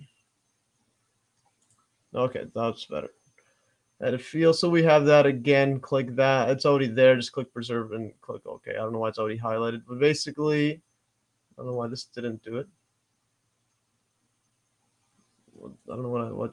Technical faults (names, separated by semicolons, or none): noise suppressor applied to music or sounds; sound cut by the noise suppressor